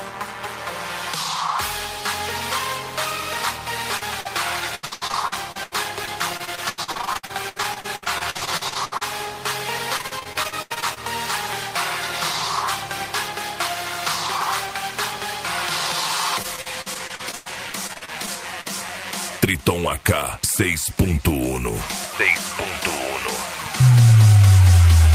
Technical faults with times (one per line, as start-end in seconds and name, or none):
3.97-4.27 short concealed packet loss
4.75-9.03 repeated packet loss (robotic sound)
9.97-10.98 repeated packet loss (robotic sound)
16.42-18.67 repeated packet loss (robotic sound)